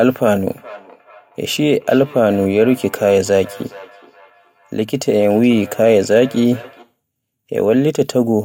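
A speech clip with feedback echo between two devices from 0.52 s to 6.95 s: a second device in the room replays the speech, and a microphone outside its own canceller's reach picks it up. Unlike room reverberation, the speech returns as distinct repeats spaced around 0.4 s apart, peaking about 21 dB below the speech.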